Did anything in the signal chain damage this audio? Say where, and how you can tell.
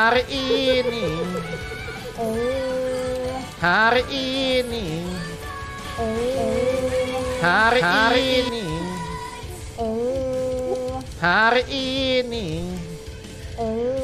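Yes. From 5.85 to 8.49 s the audio has a doubled audio track: a full-band copy of the same sound, about as loud as the original, trails it by roughly 400 ms and begins and ends abruptly. On a spectrogram, each event appears twice at a fixed offset. The likely cause is a second, slower capture or routing path being mixed in.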